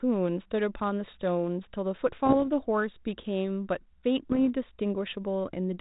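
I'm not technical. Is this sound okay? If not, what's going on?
No. The speech has two brief patches of pops and rough, crackly bursts with brief jumps in loudness, from 2.26 to 2.46 s and again from 4.32 to 4.39 s. These are bit errors on an ADPCM link, the kind of digital connection a cordless phone uses. A few bits of the signal got flipped, which throws the decoder off for a moment until it recovers.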